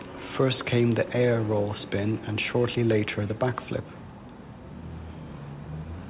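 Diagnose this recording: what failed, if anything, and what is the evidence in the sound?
Echo with no canceller runs through the whole speech clip. A faint copy, about 25 dB down, trails every phrase by roughly a fifth of a second: the far end's loudspeaker feeds its microphone, and no echo canceller removes it.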